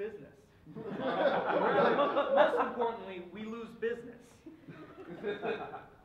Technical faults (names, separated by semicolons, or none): none